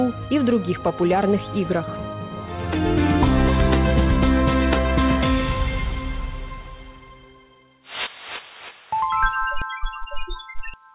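No faults can be heard anywhere in this audio.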